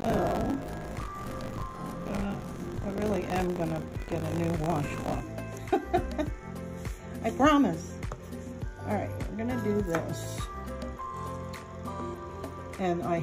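Buffer tearing runs from 0.0 to 5.2 s: writer and playback pointer cross each period, so most of each buffer replays audio a few tens of milliseconds stale, giving a 50 Hz robotic rattle.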